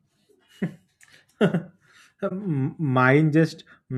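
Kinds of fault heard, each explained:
Corrupt frame concealed: flipped bits damaged part of the AAC stream, the decoder detected the bad data, and rather than play garbage it filled in that stretch itself, either by muting it or by reusing a scrambled version of the last good spectrum. In this speech the concealed stretch runs from about 2.28 to 2.32 s, roughly 36 ms, which fits a single damaged frame.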